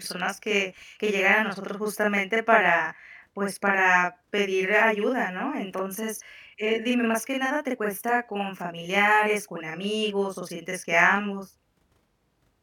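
Channel delay (doubling) runs through the whole of this speech clip: one channel arrives 40 ms behind the other, and when the two are summed to mono the late copy sits at the same level, heard as a doubled or slap-echoed repeat of every syllable.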